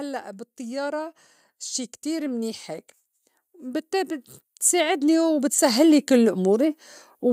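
From 3.52 s to 6.73 s, automatic gain rising lifts the level by about 10 dB as the control decides the input is too quiet. Speech and background noise swell together. On the waveform, the envelope widens steadily; the spectrogram brightens evenly across all frequencies.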